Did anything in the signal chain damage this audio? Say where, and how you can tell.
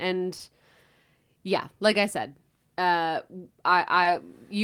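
Yes: network stage, short concealed packet loss at 0.37 and 4.03 s, each 20 ms rebuilt by extending the preceding sound, appearing as a brief smeared patch on the spectrogram.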